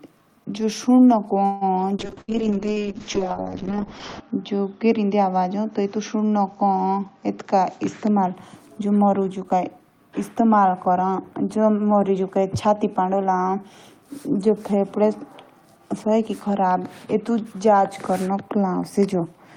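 From 1.45 to 1.64 s the speech stalls as the last sound is held and fades for about 157 ms, then resumes with nothing lost. This call audio freeze likely came from delayed packets draining the jitter buffer.

From 1.99 to 8.41 s the speech turns rough, watery and muffled. In this call bitrate drop the encoder fell from 32 to 6 kbps and the bandwidth narrowed from 20 kHz to 8 kHz, staying lowest for about 2.2 s.

Within that stretch, at 2.21 to 2.31 s, the last sound is held and fades for about 69 ms and roughly 60 ms of speech goes missing. This burst of packet loss was concealed by extending and fading the last sound.

From 7.57 to 8.28 s and again from 8.80 to 9.80 s the speech sounds hurried at an unchanged pitch, running at 105% and then 110% speed. In this jitter buffer speed-up, the receiver trimmed pitch-period slices to reduce excess delay, removing about a twentieth of a second and then about a tenth.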